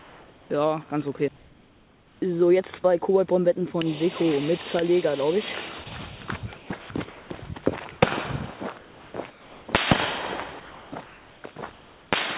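From 0.0 to 0.5 s and again from 1.36 to 2.22 s, there is comfort noise in place of the background. The room sound turns into a smooth, detail-free hiss about 2 dB quieter than the real background, which sits about 28 dB and about 33 dB below the loud passages. The likely cause is the sender stopping transmission in these quiet stretches and the receiver filling them with synthetic noise. Nothing in the foreground goes missing, and that sets it apart from a dropout.

From 2.82 to 2.84 s, sound is dropped by the voice detector. About 10 ms of sound vanishes into a 20 ms patch of that same steady noise, likely because the detector took the sound for background. It is one brief gap, not repeated switching.

From 5.84 to 7.42 s, the sound is chopped by the voice detector, likely through transmission toggling on and off more than once. About half a second in total is replaced, so the sound has two or more holes. 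The repeated toggling distinguishes it from the single drop.

Comfort noise replaces the background again from 8.78 to 9.68 s and from 10.6 to 12.12 s. Throughout, nothing above 4 kHz is present, which fits a 64 kbps G.711 A-law call path.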